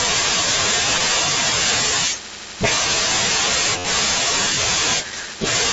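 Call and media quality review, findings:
Concealed Bluetooth headset packet loss. Brief glitches at 0.99 s and 5.26 s, each about 15 ms, almost hidden. Longer event at 3.78 to 3.85 s, about 60 ms: buzzy, steady tone held at full level, slight warble as real speech resumes. Component: headset-to-phone radio link. Mechanism: lost voice packets filled by repeating the best-matching slice of recent waveform. The longer run fits several consecutive lost packets. The mSBC wideband link itself carries speech up to 8 kHz.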